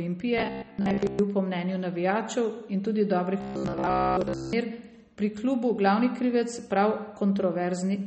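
Throughout, the speech sounds dull and watery, with nothing above 8.4 kHz and plainly audible smearing. This likely comes from MP3 compression at a starved rate, which suggests about 32 kbps.

From 0.38 to 1.19 s, just before "po mnenju navijačev in", the speech turns into a rigid metallic buzz at 66.7 Hz. This is robotic sound from repeated short buffers, likely caused by looping roughly 15 ms chunks while most of the real audio is skipped.

The same robotic buzz returns from 3.41 to 4.55 s, right after "mnenju navijačev in tudi", again pinned at 66.7 Hz.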